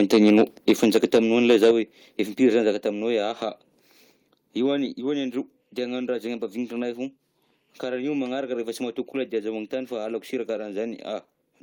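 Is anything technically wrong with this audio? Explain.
Yes. The speech has one stretch of microphone overload and four microphone volume step-downs.

Microphone overload: from 1.5 to 1.71 s the loudest moments take on a harsh, crackly edge. The peaks likely overran the converter's limit by about 5 dB, flattening their tops on roughly 7 percent of samples.

Microphone volume stepped down: the whole signal drops abruptly at 0.71 s (about 2 dB), 1.71 s (about 5 dB, right after the overload), 2.73 s (about 4 dB) and 4.86 s (about 3 dB). Each step is likely the call software cutting input gain in response to loud peaks.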